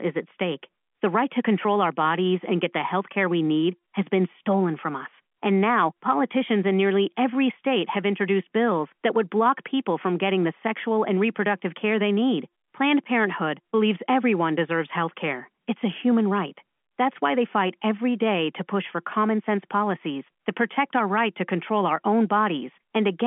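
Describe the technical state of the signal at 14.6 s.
At 14.6 s the signal is intact, with nothing faulty to report, and what can be heard is the ordinary narrow telephone band of the G.711 telephone coding, which carries nothing above about 3.7 kHz.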